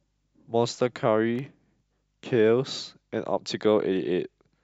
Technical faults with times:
1.18-2.01 CD scratch ticks

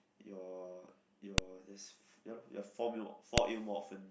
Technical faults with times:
1.38 file header played as audio
3.38 file header played as audio

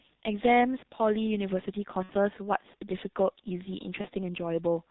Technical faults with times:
0.00-4.91 G.723.1 codec
2.03-2.13 VoIP packet loss concealed by the speech codec
4.01-4.07 VoIP packet loss concealed by the speech codec

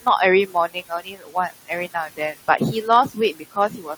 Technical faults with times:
0.00-3.98 noise suppressor artifacts
0.00-3.98 block size mismatch (truncated)
0.74-1.51 speech cut by the noise suppressor
1.94-2.61 speech cut by the noise suppressor
3.34-3.89 speech cut by the noise suppressor

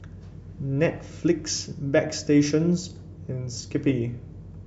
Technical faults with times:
1.47-3.58 mains hum

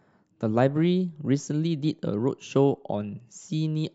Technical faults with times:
none

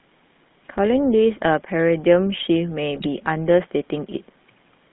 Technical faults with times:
0.00-4.92 GSM full-rate codec
2.96-3.07 GSM bit errors

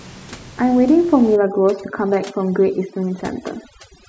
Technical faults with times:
1.36-4.09 overdone noise removal

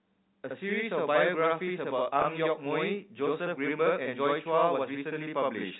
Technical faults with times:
0.00-5.80 channel delay (doubling)
2.22-2.24 packet loss with pitch repetition

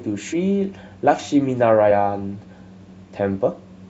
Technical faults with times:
0.32 compressed frames skipped
1.90 compressed frames skipped

